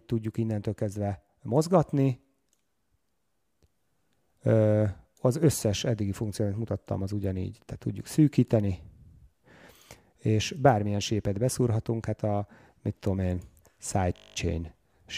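A steady 50 Hz buzz fills 14.16 to 14.36 s: a system hang loop, the hardware replaying one 20 ms buffer ten times while the system froze.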